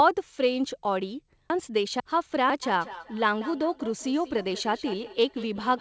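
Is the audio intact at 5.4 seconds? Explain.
No. Feedback echo between two devices runs from 2.63 s to the end: a second device replays the audio into the microphone, returning it as discrete repeats about a fifth of a second apart, up to about 16 dB below the speech, unlike reverb's smooth tail.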